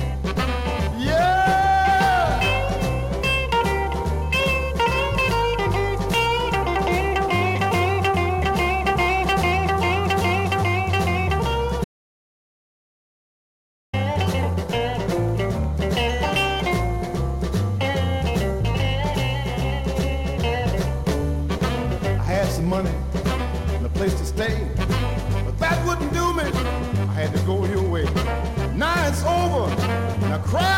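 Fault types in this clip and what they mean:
Audio dropout to silence: from 11.84 to 13.93 s the sound cuts out mid-flow into silence, no room tone at all, for about 2.1 s, then snaps back. That's likely the input dropping while the recorder kept writing silence, so whatever happened there is lost.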